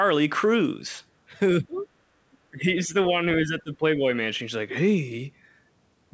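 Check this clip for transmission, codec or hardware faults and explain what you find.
Two faults appear in this speech: the talker gets ducked while the far side is playing, and scraps of that far-side voice leak through.

Speech suppressed in double talk, at 1.61–1.86 s, 2.51–2.95 s and 3.41–4.04 s: the echo canceller likely mistook the talker for loudspeaker echo and turned both down. The level dips by up to about 25 dB, 10 dB and 15 dB. On the waveform the envelope sags, and the spectrogram shows a dimmed band.

Other side's voice leaking through, at 1.79–1.83 s and 2.32–2.37 s: likely uncancelled loudspeaker sound sits about 35 dB and 40 dB below the speech. It shows as brief, weak smears on the spectrogram.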